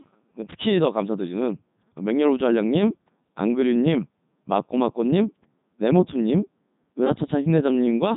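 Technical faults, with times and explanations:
Throughout, Codec 2 vocoder: the speech sounds heavily robotic and buzzy, with nothing above 3.8 kHz, and the damage fits Codec 2's 3.2 kbit/s mode. The decoder keeps no waveform. It rebuilds the speech from sine waves using only pitch, voicing, energy and a coarse spectral envelope. That resynthesis causes the buzzy, mechanical quality, unlike the swirly, smeared artefacts of a starved waveform codec such as MP3 or Opus.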